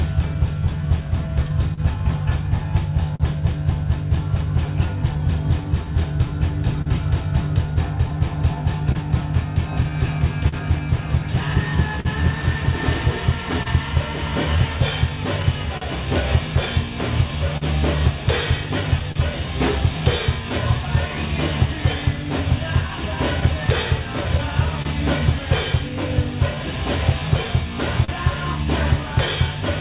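Small, unevenly spaced timing hiccups run through the whole clip. This is clock drift between sender and receiver: the sender's clock runs roughly 3% slow, so the receiver keeps compensating.

From 0.34 to 4.89 s, about five brief ticks or smears appear, the longest around 40 ms. These are scattered short gaps, where lost or late packets were patched by continuing the last sound. The same pattern returns with about seven gaps from 8.92 to 19.18 s, longest around 50 ms, and about four from 23.40 to 25.92 s, longest around 30 ms.

From 0.78 to 29.02 s playback runs at 99% speed. These are repeated timing corrections: the receiver repeats short pieces to keep pace with the slower sender, adding roughly 300 ms overall.

At 6.82 to 6.88 s, and again at 28.04 to 28.10 s, a sound is held too long, by 40 ms and then 38 ms, with a slight buzz or dip. Each is a short stall from a late packet: the jitter buffer ran empty, the last sound was stretched, and playback resumed with nothing lost.

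Throughout, nothing is heard above 4 kHz, which fits a narrowband G.711 mu-law call path.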